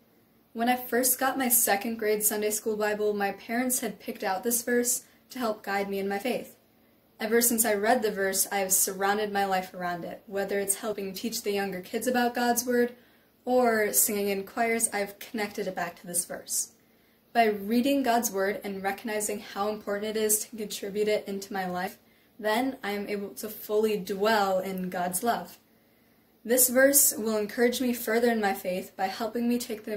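The decoder skipped compressed frames three times, dropping whole frames that were missing or rejected as damaged, so playback lurches forward. At 6.22 s and again at 10.93 s the audio jumps ahead by about 30 ms, which fits a single lost frame of 32 ms. At 21.87 s the jump is about 70 ms, pointing to two frames gone.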